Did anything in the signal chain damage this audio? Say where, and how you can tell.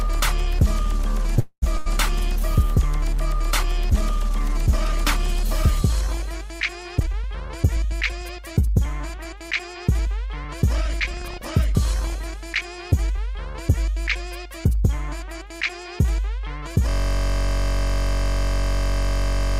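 Yes. From 1.39 to 1.64 s the sound stretches into a fading buzz with about 60 ms of flat silence, then resumes intact, a likely call audio freeze at the network stage.

At 1.78 to 1.88 s, a burst of packet loss: the spectrogram shows a decaying smear, and about 80 ms of audio is skipped.

From 6.96 to 11.29 s, a jitter buffer speed-up plays the sound at 105% speed with unchanged pitch. Tiny pitch-period cuts remove about a fifth of a second in total.

From 16.89 s to the end, a system hang loop repeats one 21.33 ms block. This fits a 1024-sample buffer and makes a steady 46.9 Hz buzz with identical repeating waveform cycles.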